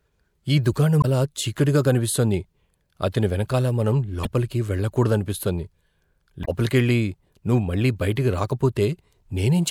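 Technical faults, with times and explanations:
1.00–1.05 s, 4.23–4.27 s and 6.41–6.48 s, damaged data in a compressed stream: three brief blips, the first just before "చీకటిగా కనిపిస్తోంది" and the second right after "అతని వెనకాల మనం". Corrupted bytes make the decoder misread those frames and lose sync until it finds the next valid frame header, which produces each blip.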